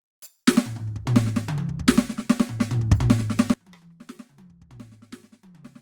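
Music that, from 3.54 s to the end, collapses into a faint remnant about 24 dB quieter, most likely from one channel inverted cancelling the shared content.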